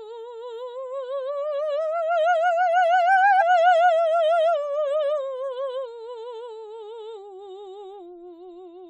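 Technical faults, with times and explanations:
3.40 to 3.42 s, damaged data in a compressed stream: a quick glitch cuts through the music for about 20 ms. Corrupted bytes there knocked the decoder off its frame sync, so it produced garbage until it found the next valid frame header.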